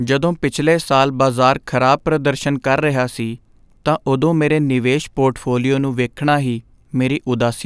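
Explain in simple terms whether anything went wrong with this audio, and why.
Nothing went wrong here: the recording of speech comes through with no technical faults to be heard anywhere along it.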